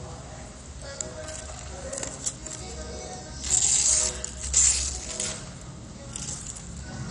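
From start to finish the audio sounds dull and gurgling, with a granular, watery edge and nothing above 11.3 kHz. This is likely MP2 compression at a low rate, around 48 kbps, where upper sub-bands drop out and the remaining bands are coarsely quantised.

From 3.68 to 5.18 s a steady low tone sits under the sound, roughly 20 dB below it. This is mains hum at 60 Hz, where the power line leaks into the signal through a ground loop or a nearby transformer.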